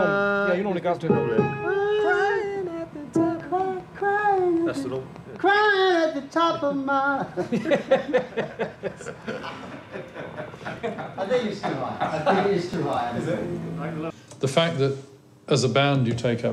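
From 3.40 to 5.77 s a train of clicks runs over the audio: roughly fifteen sharp ticks at a steady 5.1 per second, each peaking at about the level of the sound itself. The near-identical shape and even spacing set it apart from random crackle or a one-off pop. It sounds like an outside pulse stamped onto the signal, likely interference from nearby equipment or a faulty connection or power supply. It ticks through pauses as well as louder passages.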